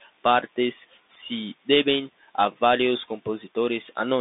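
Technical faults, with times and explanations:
Throughout, Bluetooth CVSD headset codec: the speech sounds thin and phone-like, with scratchy s sounds over a grainy hiss. Nothing passes above 3.8 kHz, within a 200 Hz to 3.7 kHz band, which fits a 64 kbps one-bit delta codec whose adaptive step lags fast, loud highs.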